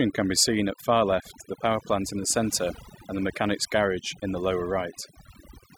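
A speech clip with overdone noise removal running the whole way through. The denoiser's clearly set too hard: the background drops and breaks up into little twinkling specks, and the voice's quieter parts get gated away with the noise.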